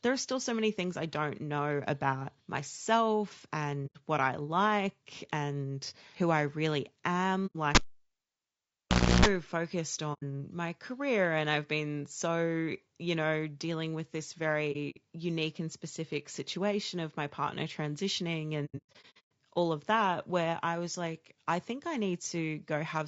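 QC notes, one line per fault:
throughout, low-delay AAC compression: the speech was likely encoded with AAC-ELD, the short-frame codec used for video calls, at a low rate; the plainly audible damage fits roughly 32 kbps. Those short frames cannot separate the pitch harmonics cleanly and leave few bits, so the speech sounds rough and grainy, with noise filling between harmonics and a dulled, somewhat synthetic top band.
3.86–3.97 s, 7.46–7.56 s, 10.13–10.23 s, 14.72–14.98 s, 18.65–19.29 s, AAC frame loss with muting: the decoder lost frames and filled them with silence, fading out and back in over the overlapping windows, so each gap is a soft-edged hole. The first falls after "don't know about myself", before "what I like and"; the third ends before "my career and I've". The first three each last about 90 ms, which fits three lost frames. At 14.72 s the dropouts scatter over about 240 ms, the longest run around 70 ms. 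From 18.65 s, between "of my partner transitioning" and "all of that where", about 450 ms is missing across 660 ms, with runs up to roughly 100 ms.
7.75–9.26 s, cable pulled and plugged in: a live cable was pulled out and pushed back in. Breaking the contact gives a pop, then the signal drops to near silence for about 1.46 s. As the plug goes back in, only the tip touches at first, so a 60 Hz mains buzz comes through for about 0.32 s. A second pop follows as full contact restores the sound.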